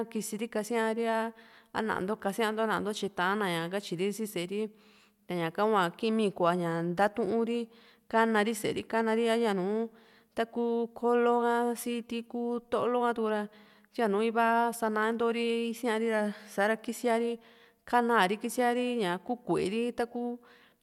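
Nothing in this bit of recorded speech calls for a technical note, as there's no fault to point to anywhere in it.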